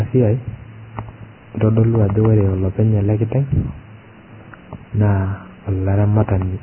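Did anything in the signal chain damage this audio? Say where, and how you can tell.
Yes, at the codec stage, throughout the speech: everything above 3.1 kHz is gone and the remaining treble sounds hissy and grainy, with smeared attacks, likely from heavy Vorbis compression at a very low bitrate near 11 kbps. A spectrogram shows a hard ceiling at 3.1 kHz and speckled, noise-filled upper bands where fine detail was coarsely quantised.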